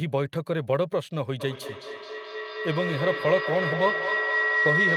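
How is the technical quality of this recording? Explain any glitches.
The recording has a serious fault: feedback howl runs from 1.4 s to the end of the clip. A microphone is picking up a loudspeaker that plays the same call, and each trip around that loop adds level, so the sound keeps returning louder and narrowing to one tone near 2 kHz. The howl pulses roughly every 200 ms, the loop's delay, and peaks about 1 dB above the speech.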